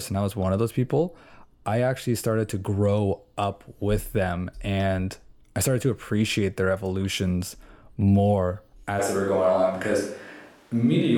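A switch to a distant microphone happens at 9.01 s, right after "appreciate their evolutions more", and lasts to the end of the clip. The speech turns suddenly roomy and hollow, with less bass, while the level stays about the same. Background noise sits roughly 35 dB below the speech. The likely cause is that the close microphone's signal dropped out and a microphone further from the speaker took over.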